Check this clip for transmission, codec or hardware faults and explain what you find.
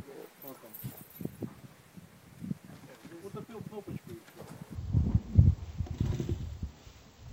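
One fault is present: stereo read as mono, from 4.75 s to the end. Interleaved left and right samples are played back as one channel, so the sound runs at half speed and 12 semitones low. A spectrogram shows content compressed downward, with a fainter mirrored copy in the upper half.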